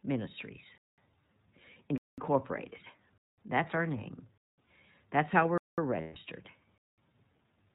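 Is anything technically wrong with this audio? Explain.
Yes, three things. The whole speech clip has the iLBC codec sound: nothing above 4 kHz, a rough, slightly synthetic edge, which fits the 13.33 kbps, 30 ms frame mode.

Gaps between chunks show up at 0.78, 1.98, 3.18, 4.38, 5.58 and 6.78 s. Each is a 200 ms hole after every second of audio, from delivery in 1 s chunks.

Then, from 6.01 to 6.17 s, lost iLBC frames: the decoder repeats the last pitch cycle with noise for about 150 ms, a held, buzzy vowel, with a clean recovery straight after. That length fits five lost 30 ms frames.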